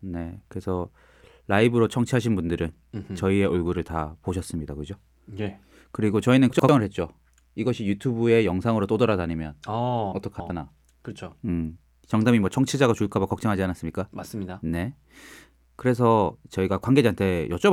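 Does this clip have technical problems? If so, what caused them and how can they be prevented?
Yes: chunks out of order at 6.50–6.69 s and 10.12–10.50 s, where blocks of about 93 ms play one and three chunks late, leaving jumbled sound with hard joins. Sequence-number the chunks and reorder them in a jitter buffer before playback or writing.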